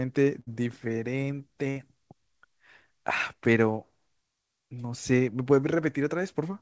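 Burst of packet loss at 0.40 to 0.49 s and 1.71 to 1.78 s in this speech: the receiver stretches the last sound as a fading buzz or hiss for roughly 50 to 70 ms, then jumps ahead, dropping about 60 ms each time. The call path's band limit is audible as nothing above 8 kHz, which fits a G.722 codec.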